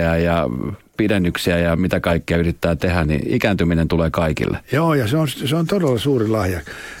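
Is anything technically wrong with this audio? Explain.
Yes, the speech has two bit error spikes. A single bit flipped in memory or on a digital link, forcing one sample to jump by a power of two before snapping back. It happens at 3.52 s, just before "tulee kaikille", peaking at about -30 dBFS, and again at 5.98 s, right after "on se on todella", at about -18 dBFS. Each is heard as one sharp, broadband tick unrelated to the speech, the second noticeably louder.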